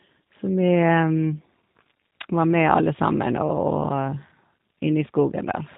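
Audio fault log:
Throughout: G.729 codec. The speech has the slightly rough, synthetic edge of an 8 kbit/s VoIP codec, most likely G.729A, and the damage is easy to hear. Nothing above 4 kHz makes it through, so the top end is gone. Each 10 ms frame is rebuilt from a vocal tract filter, a pitch predictor and a handful of pulses rather than sent as a waveform. That rebuilding is what gives the buzzy, slightly artificial texture, while the speech itself stays intelligible.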